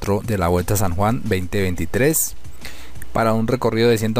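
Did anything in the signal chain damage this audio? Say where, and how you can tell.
No, nothing along the chain seems to have touched this one, and there's nothing to point at in any stage.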